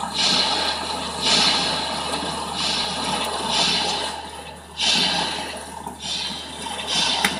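No technical faults are audible anywhere in the audio.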